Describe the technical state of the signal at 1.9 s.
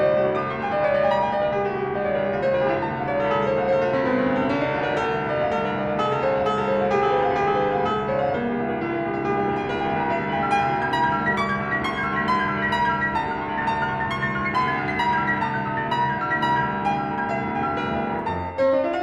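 At 1.9 s the music is being played back at the wrong sample rate, a fault present throughout the clip. The samples are read out faster than they were captured, which fits 44.1 kHz material clocked out at 48 kHz without conversion. Tempo runs about 1.09 times fast and pitch sits about 1.47 semitones sharp.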